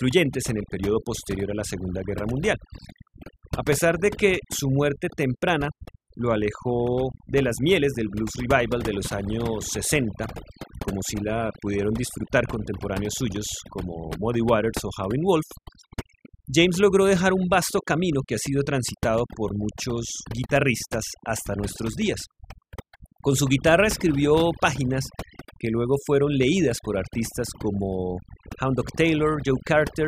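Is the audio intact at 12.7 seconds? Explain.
No, at 12.7 seconds you're hearing the overdone noise removal that runs through the whole clip. The reducer is set so hard that bands near its noise estimate get pulled right down, taking quieter speech detail too, so the background sits near silent with little twinkly specks.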